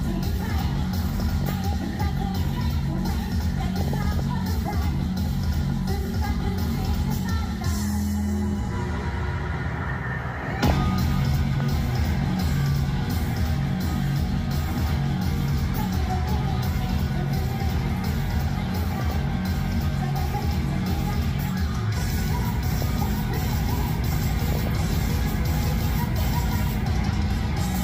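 DAB burbling first appears from 1.13 to 2.03 s and again from 3.76 to 4.20 s and 10.55 to 10.72 s. Bit errors from weak reception, at a rate of a few tenths of a percent, slip past the error correction into the MP2 audio. Corrupted samples put short blips of noise into individual sub-bands, and corrupted scale factors make sub-bands jump in level for up to a frame, producing a burbling texture laid over the programme.

At 11.60 to 11.62 s a single loud pop cuts in, peaking about 10 dB above the surrounding sound, which continues underneath. It is a sharp, isolated transient, likely from a voltage step such as a switch, plug contact or static discharge, shaped by the downstream circuitry into one brief click.

The DAB burbling returns from 18.83 to 19.16 s, 22.74 to 23.02 s and 24.52 to 24.69 s, with the same sub-band burbling as the earlier bursts.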